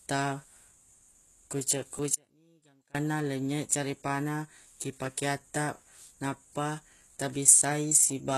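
Speech clip with three technical faults. Throughout, the treble has a gritty, metallic quality, and the s sounds are smeared. The codec damage is plainly audible and likely comes from HE-AAC compression at around 16 kbps. The codec keeps only the lower spectrum and synthesises the top by copying lower bands upward under a coarse envelope, so the rebuilt harmonics don't line up with the real ones. On a spectrogram the energy stops abruptly at 12.4 kHz, and the upper band looks like blocky, repeated copies of the region below it. At 1.98 s there is a repeated buffer: a piece about 5 ms long, which fits a small output buffer, plays two extra times with hard joins, and roughly 10 ms of new audio never arrives. It comes across as a brief click or buzz. The waveform shows three identical short segments in a row, with discontinuities at the seams, and the spectrogram shows a thin vertical stripe there. 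From 2.15 to 2.95 s there is an audio dropout to a faint residue. The signal vanishes abruptly for about 0.8 s, leaving only faint sound about 30 dB below normal, and returns just before "lenynye carepa na ki". The likely cause is the signal being lost while the path after the break stayed live. The waveform collapses to a thin band with sharp edges, and the spectrogram goes almost dark across that span.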